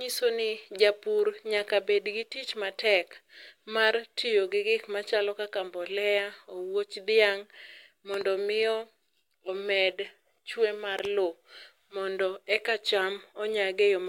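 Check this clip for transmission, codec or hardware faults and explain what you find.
There's a hardware-type fault here, a loud pop that turns up twice. At 8.14 to 8.23 s, and again at 10.99 to 11.07 s between "omed chwe mar" and "lowo mondo eka", you get a quick double pop sitting roughly 10 dB above the speech, which keeps running underneath. It's likely a voltage step or spike from a connector, switch or static discharge hitting the line, with the following circuitry shaping it into that sharp doubled thump.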